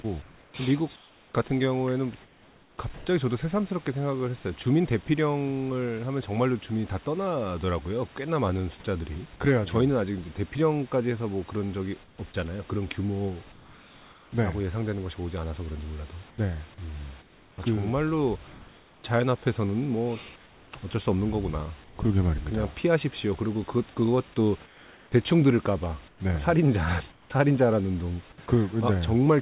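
Sound chopped by the voice detector, 0.02 to 3.06 s: the sender likely switched transmission on and off repeatedly, so about 1.4 s of quiet sound became synthetic fill, making the opening choppy.

Sound dropped by the voice detector, 5.06 to 5.08 s: a 20 ms fragment was likely judged background and not sent, leaving a brief patch of steady noise.

Comfort noise in place of the background, at 12.04 to 12.18 s, 13.52 to 14.32 s, 16.3 to 19.04 s, 20.36 to 21.98 s and 24.66 to 28.48 s: during pauses the sender likely stopped transmitting, and the receiver filled the gaps with flat, featureless noise. The first two stretches are about 5 dB and 3 dB quieter than the real room tone.

Sound dropped by the voice detector, 28.46 to 28.48 s: at the end of that last pause, about 10 ms of returning sound was likely missed, so the onset is clipped into comfort noise.

The audio comes through a narrowband G.711 call path with nothing above 4 kHz.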